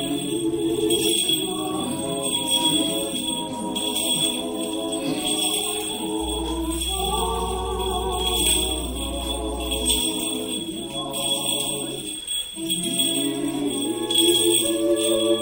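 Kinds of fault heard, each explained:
Mains hum: A steady low tone at 60 Hz sits under the sound from about 6.2 s to 10.0 s. It comes from the power line leaking into the signal path, through a ground loop or a nearby transformer. Here it is strong, at about 10 dB below the signal, so it is easy to hear. The hum stays fixed in pitch.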